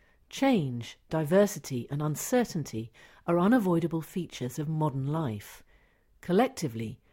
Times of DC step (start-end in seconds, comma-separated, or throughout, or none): none